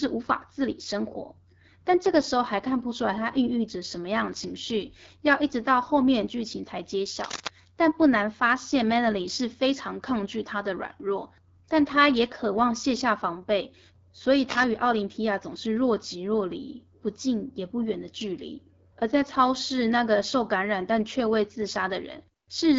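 The whole clip carries AMR wideband (HD Voice) codec damage. The speech sounds rough and raspy, with nothing above 7.5 kHz, which fits one of the low rates around 8.85 kbit/s. From 7.20 to 7.48 s, and again from 14.49 to 14.65 s, scratchy, rustling bursts sit only a little below the speech, most likely cable scratch noise from a worn connector being moved.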